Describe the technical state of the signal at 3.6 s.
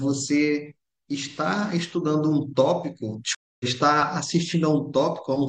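A stream reconnect spans 3.35 to 3.65 s. The connection dropped, leaving about a quarter-second of silence, then the player reconnected and started a fresh decoder mid-stream. The speech resumes roughly 0.2 s further on, so a short stretch is skipped.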